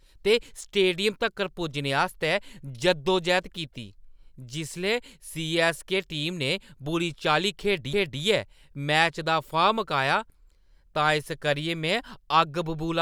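At 7.93 s the speech is hit by a CD skip: a knock or a flaw made the laser jump to another turn of the disc's spiral, so playback mutes for only a few milliseconds and resumes at a different point in the recording. It is heard as a sharp tick followed by an abrupt discontinuity in the speech. On a waveform it shows as a brief flat gap with mismatched edges. On a spectrogram it is a thin full-band vertical line where the harmonics break off and restart unaligned.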